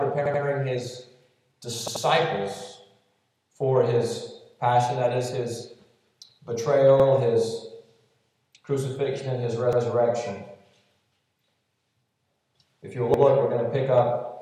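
The audio has repeated buffers. Short pieces stutter at 0.26, 1.88, 7.0, 9.73 and 13.14 s, doubling at the last three and tripling at the first two. Each repeat lasts about 85 ms, which fits a 4096-sample buffer replayed when new data arrived late.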